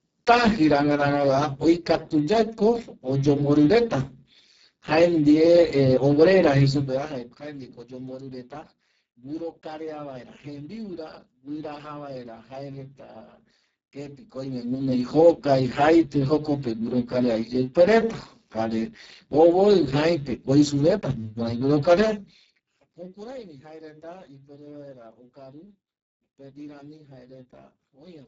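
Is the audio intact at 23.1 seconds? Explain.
No. At 23.1 seconds you're right in the middle of a stretch of zipper noise that runs from 21.94 to 23.44 s. The level is being pulled down by roughly 25 dB, but instead of gliding, it drops in small unsmoothed jumps at something like fifty a second. Each jump puts a tiny click into the waveform, so you hear a fine ticking or zipping riding on top of the sound while it fades.

That moment also carries the Speex codec damage that's present through the whole clip. The speech is heavily degraded, hoarse, noisy and leaning toward robotic, which points to Speex running at a very low bitrate, somewhere around 6 kbps. At that rate the coder has almost nothing left to describe the excitation, so the voice loses its natural texture. Whatever sits high up is just shaped noise, and nothing at all comes through above 7.7 kHz.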